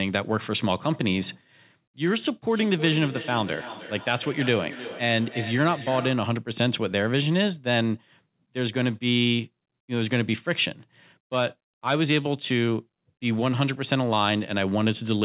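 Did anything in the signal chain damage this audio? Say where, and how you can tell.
Yes. The damage is in the call processing stage: a feedback echo between two devices, where a second device in the same room plays the call aloud and its sound leaks back into the first microphone. Each device's echo canceller removes only its own playback, so the leak goes back out. From 2.5 to 6.38 s the speech returns about every 0.3 s, each copy thinner and more ringing, peaking at about 13 dB below the speech.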